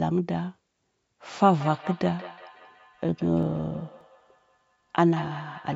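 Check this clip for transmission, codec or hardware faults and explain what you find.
Two faults are audible in this speech clip: a repeating echo over most of it, and a short burst of ticks in the middle.

From 1.54 s to the end, each phrase returns about a fifth of a second later, thinner and more ringing, peaking about 16 dB below the speech. This is feedback echo between two devices: one device plays the other's microphone signal, that microphone picks it up again, and neither echo canceller removes the other device's playback.

Between 3.43 s and 4.40 s, six sharp ticks sit over the speech at an even spacing, each only a few milliseconds long. These are CD scratch ticks: a blemish destroys more data than error correction can rebuild, once per disc revolution, and the player patches the damaged samples.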